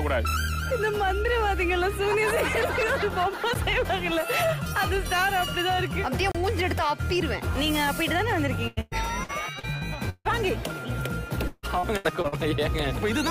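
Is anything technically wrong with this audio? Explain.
Yes, there are two kinds of fault.

Block of digital silence: at 3.54 s and again from 6.32 to 6.35 s, the output buffer was likely not filled in time, so those samples went out as zeros. The first hole lasts about 10.7 ms, which fits a 512-sample buffer, and the second lasts 32 ms. Because the signal drops straight to zero and back without any fade, the first is heard as a sharp tick and the second as a brief dropout.

Repeated packet loss (robotic sound): from 8.67 to 10.27 s and from 11.47 to 12.34 s, audio data repeatedly arrived too late or not at all, with six holes in each stretch. Each hole was patched by extending the last sound, covering about 31% of the first stretch and 39% of the second. The longest patches run about 155 ms and 151 ms. The result is choppy audio with pieces missing.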